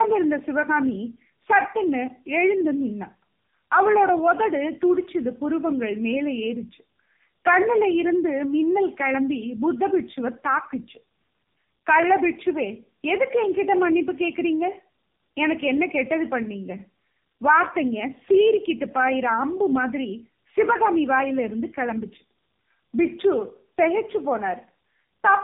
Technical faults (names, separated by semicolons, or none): tandem speech coding